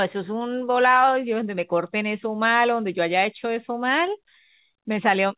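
No faults; the telephone-band speech stays steady.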